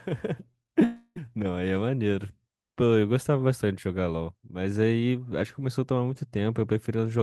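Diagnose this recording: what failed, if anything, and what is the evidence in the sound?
The network stage failed in the opening second, producing short concealed packet loss at 0.51–0.55 s, 0.63–0.67 s and 0.67–0.70 s. Each gap is 20 ms of missing audio, consistent with single lost packets, and the receiver's concealment synthesized a continuation of the preceding sound before crossfading back. These gaps are audible as brief smears or wobbles. A spectrogram would show harmonics frozen or blurred across each gap, with a slight discontinuity in the waveform envelope at the rejoin.

A long network dropout follows from 0.84 to 1.18 s, with about 320 ms of audio missing. Concealment carries the last sound forward as a fading buzz or hiss for roughly 270 ms, then leaves about 50 ms of near-silence before the signal resumes mid-stream with the lost portion absent. The likely cause is a burst of consecutive lost packets. 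On a spectrogram, the repeated texture of the last sound decays into a blank band, and the waveform shows a tapering tail, then a flat stretch.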